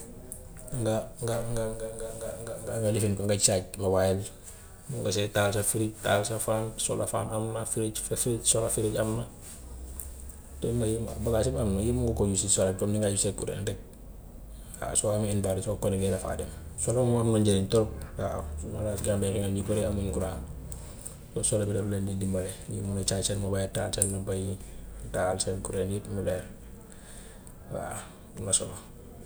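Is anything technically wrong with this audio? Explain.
No, the speech signal shows no technical faults.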